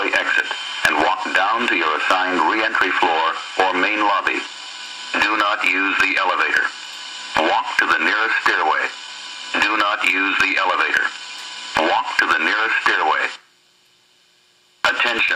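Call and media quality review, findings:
Periodic USB or driver dropouts, 13.49–15.29 s: regular ticks at a 0.1 s interval, about twenty, each a gap of roughly 1 ms filled with silence. Points to the USB bus or audio driver being blocked at a fixed interval by a background task.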